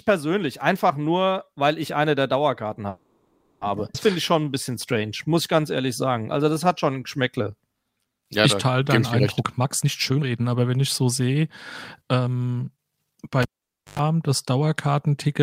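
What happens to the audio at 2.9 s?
At 2.89 s the speech stalls in a call audio freeze lasting until 3.63 s. For about 0.72 s the last sound is stretched into a buzzy, hissing continuation that decays without dropping to silence. The likely cause is packets held up in transit, leaving the jitter buffer empty while the receiver improvised. When the packets arrive, speech resumes exactly where it stopped, with nothing lost, but everything afterward now runs about 0.72 s late.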